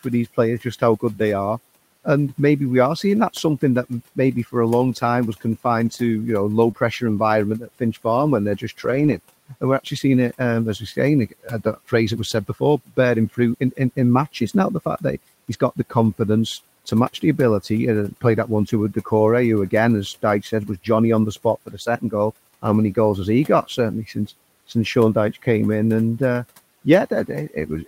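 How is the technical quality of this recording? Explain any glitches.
Technical quality takes a hit from three problems: an overeager noise suppressor, three patches of error-corrected packet loss, and one brief concealed dropout. The room noise sits about 25 dB under the speech.

The speech cut by the noise suppressor runs through most of the clip, in stretches at 0.04–2.06 s, 3.34–15.92 s, 18.22–25.46 s and 26.85–27.88 s. The suppressor mistakes quiet bits of speech for background and pulls them down with it, by up to about 16 dB. Soft consonants and word endings come out swallowed or faint, a bit over a second in total.

Lost packets rebuilt from error correction show up at 5.85–5.91 s, 8.83–9.17 s and 15.53–15.55 s. The decoder played the low-bitrate backup copy carried in the following packet, so nothing drops out, but those 20–180 ms sound rougher and noisier. The longest patch is around 9 s.

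The short concealed packet loss at 6.71–6.75 s had no backup copy. The receiver stretched the preceding sound across the roughly 20 ms hole and blended back in, leaving a quick smear or wobble.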